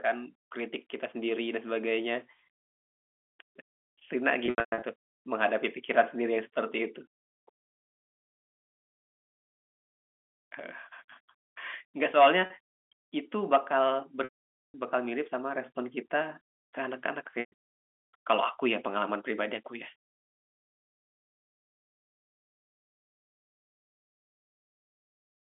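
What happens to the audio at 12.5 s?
At 12.46 to 12.50 s there is a packet loss with pitch repetition: about 40 ms of audio goes missing, which fits two 20 ms packets, and the receiver fills the gap by looping the last pitch period. It sounds like a brief, slightly held, buzzy note. On a waveform the same cycle repeats while fading in level; on a spectrogram the harmonics freeze into flat lines, all below the telephone band's 3.4 kHz ceiling.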